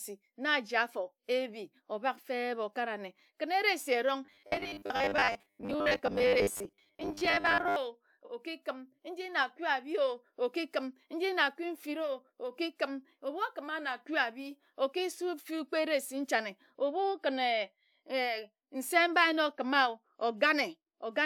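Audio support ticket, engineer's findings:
Robotic sound from repeated short buffers, 4.25–7.76 s: rigid metallic buzz at 100 Hz; spectrogram shows harmonic comb at 100 Hz spacing. Likely ~10 ms playback buffer repeated, roughly half the output.

Repeated frames, 8.25–8.29 s: single 46.4 ms compressed frame decoded twice, brief stutter; waveform shows identical block back to back. Stream or file writer duplication, adds 46.4 ms.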